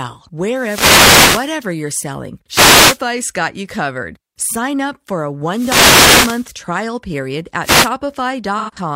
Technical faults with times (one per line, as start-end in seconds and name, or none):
0.53-1.60 wireless microphone noise hit
2.49-2.99 wireless microphone noise hit
5.47-6.54 wireless microphone noise hit
7.61-7.90 wireless microphone noise hit
8.58-8.77 AAC frame loss with concealment